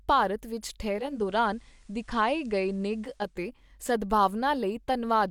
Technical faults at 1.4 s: digital radio blending to analogue

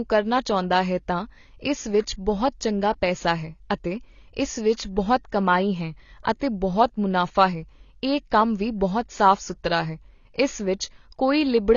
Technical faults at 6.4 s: AAC compression; pre-echo

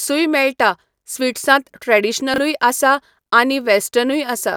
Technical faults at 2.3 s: chunks out of order

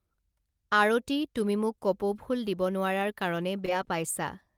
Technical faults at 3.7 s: short concealed packet loss; lost packet rebuilt from error correction

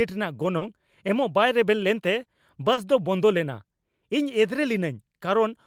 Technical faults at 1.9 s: none

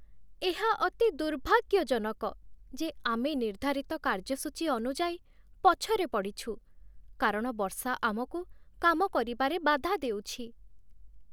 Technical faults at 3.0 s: none

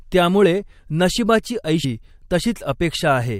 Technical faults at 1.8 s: stream segment skipped

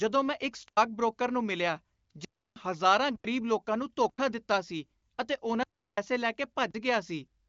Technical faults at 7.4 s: none

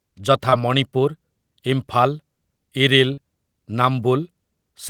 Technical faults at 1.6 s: none

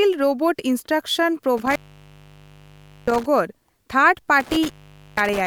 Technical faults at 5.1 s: intermittent contact

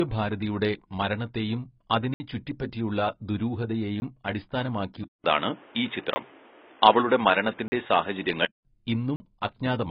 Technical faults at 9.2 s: AAC compression; block of digital silence

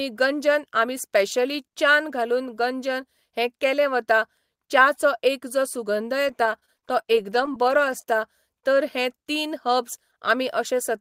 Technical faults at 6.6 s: repeated packet loss (robotic sound)

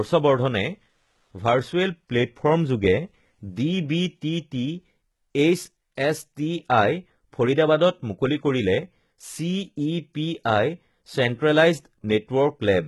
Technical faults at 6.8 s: HE-AAC compression

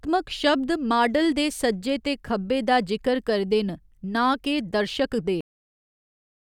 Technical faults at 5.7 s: cut-off end

